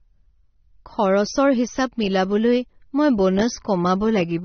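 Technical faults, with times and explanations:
Throughout, AAC compression: the speech is plainly dull and smeared, with nothing above 6.3 kHz and a fizzy, warbling texture on sibilants and held sounds. This is likely low-bitrate AAC-LC coding, around 27 kbps, lowering the cut-off and coarsely quantising what remains.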